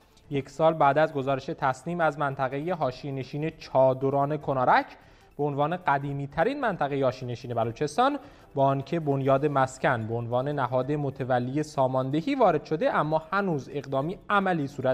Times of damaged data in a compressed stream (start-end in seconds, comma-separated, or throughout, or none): none